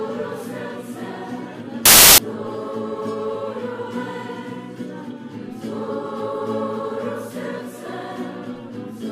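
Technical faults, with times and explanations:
1.86 to 2.18 s, samples built from the wrong bytes: for about a third of a second the bytes of each sample are assembled wrongly, misaligned or swapped. The rapidly changing low-order bits then dominate each value, so the sound becomes a loud burst of harsh broadband noise.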